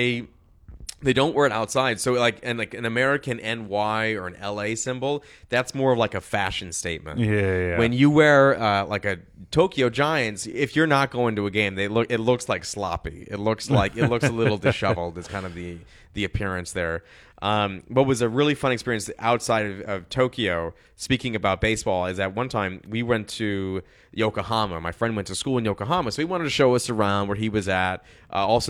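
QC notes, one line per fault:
Nothing stood out on listening to the speech.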